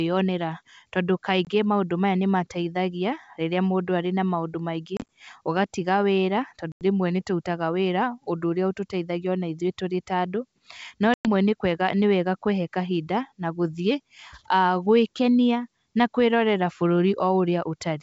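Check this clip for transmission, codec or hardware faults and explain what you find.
Four dropouts from packet loss on an ADPCM call are audible in this G.722 wideband speech. Gaps fall at 1.45–1.47 s, before "maũndũ maya nĩ mateithagia"; 4.97–5.04 s, scattered short holes after "arĩ na maũndũ maingĩ"; 6.72–6.82 s, after "maũndũ maingĩ ũgatiga wĩra"; and 11.14–11.28 s, the longest at 110 ms. Lost packets become silence, the decoder's predictor and step size desynchronise, and speech resumes with brief, slight distortion.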